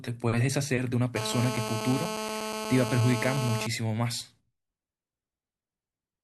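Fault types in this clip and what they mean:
GSM phone buzz: a 2G handset near the recording chain was transmitting, and some part of the audio circuitry rectified its radio pulses into a harsh, raspy buzz at about 217 Hz, stacked with harmonics and unrelated to the speech. It comes in at 1.16 s and holds steady until 3.67 s, which is how a phone on an active call sounds, and it sits only about 6 dB below the speech.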